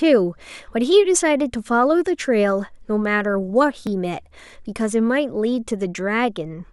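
A dropped buffer (overrun) occurs at 3.87 s in the speech, likely because the recording software fell behind and the hardware overwrote a few milliseconds of samples before they were read. The two sides join with no gap, producing a small jump.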